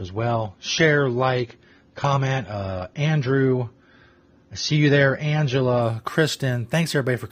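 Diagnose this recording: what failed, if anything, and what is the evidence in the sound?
Adaptive stream starting at a low bitrate (network/codec stage): until 5.82 s, nothing appears above 6.9 kHz and artefacts are heavier. The spectrogram's high band then fills abruptly, gaplessly, consistent with a step from about 24 to 96 kbit/s AAC.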